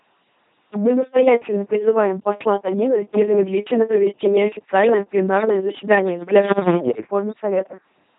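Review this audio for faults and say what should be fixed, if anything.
The speech is LPC-10 vocoded for its whole length, with heavy damage. Each short frame is rebuilt by a ten-pole vocal tract filter driven by either a pulse train or noise, never a mix. The result is a buzzing, mechanical robot voice, with stray buzz or hiss wherever a frame is misjudged as voiced or unvoiced. The harsh quality points to a 2.4 kbit/s coder. On a spectrogram, voiced stretches show rigid, evenly spaced harmonic lines under smeared formants, unvoiced stretches show flat noise, and nothing appears above 3.8 kHz. The waveform shows repetitive, pulse-like periods with abrupt frame-to-frame jumps. To prevent it, route the speech through a modern wideband codec at an adequate bitrate instead of a legacy 2.4 kbit/s vocoder.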